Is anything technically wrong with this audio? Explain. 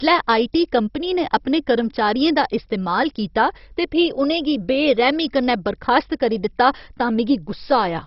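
Yes. Throughout, the speech sounds dull and gurgling, with a granular edge and nothing above about 5.6 kHz. This is likely heavy MP2 compression, consistent with roughly 32 kbps, where too few bits switch upper sub-bands off and leave the remaining bands coarsely quantised.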